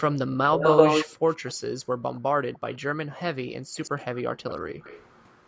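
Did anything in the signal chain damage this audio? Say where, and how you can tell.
Yes. Echo leak appears at 0.0 to 1.54 s, 2.14 to 2.21 s, 2.54 to 2.78 s, 3.75 to 4.18 s and 4.49 s to the end. Each time, a copy of the speech trails it by about 130 ms. In the opening stretch the copy is even louder than the direct speech. Later it sits roughly 20 to 30 dB below. This happens at the call-processing stage: a far-end loudspeaker fed a microphone, and its echo canceller likely failed to subtract that pickup.

Background gated by the echo canceller occurs at 1.76 to 2.03 s, 3.57 to 3.75 s and 4.62 to 4.73 s. The room sound dips sharply and comes back, about 40 dB down in the first two and about 34 dB in the last. These dips are a fraction of a second each. The suppressor in the same call chain pulled the microphone level down while loudspeaker playback was active, then released it.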